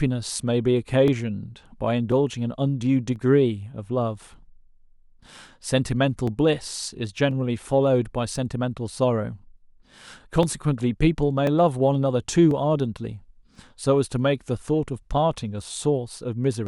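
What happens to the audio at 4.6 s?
At 4.6 s the speech sits inside a run of clock drift buffer slips lasting from 1.08 s to the end of the clip. A click or pop recurs every 1.04 s. The likely cause is two devices running on separate clocks, roughly 700 ppm apart, so the buffer between them drifts until a few dozen samples are dropped or repeated. A waveform shows a small step at each slip, and a spectrogram shows evenly spaced thin vertical broadband lines.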